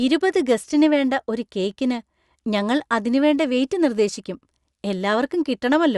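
A short bit of speech, and nothing technically wrong turns up anywhere in it.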